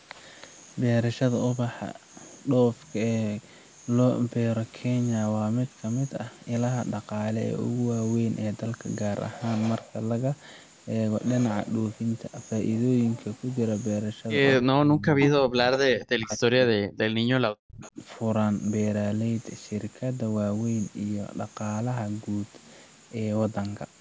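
Speech, with three dips at 14.58–15.2 s, 15.45–17.1 s and 17.48–17.98 s, falling by roughly 25 to 40 dB. These are speech suppressed in double talk, likely from an echo canceller ducking the talker while the far end spoke. Between and within them, echo leak is heard at 15.22–15.43 s and 17.82–17.91 s as a delayed copy about 285 ms late. The first copy is strong, the second faint. It is likely loudspeaker echo the canceller missed, and its fixed lag and repeated content distinguish it from room reverberation.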